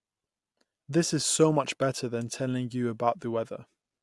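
No technical faults can be heard anywhere in this speech recording.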